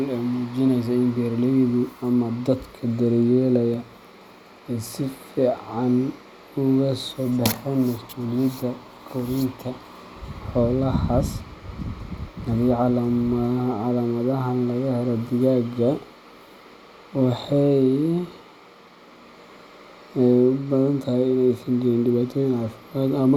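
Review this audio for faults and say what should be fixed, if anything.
Nothing here needs fixing, as there are no faults to point to anywhere in this speech recording.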